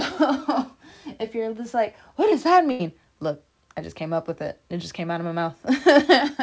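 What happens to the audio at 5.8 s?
Nothing goes wrong at 5.8 s: the speech carries straight through intact, with only the steady band limit of the call path, nothing above 8 kHz, which fits a wideband codec such as G.722.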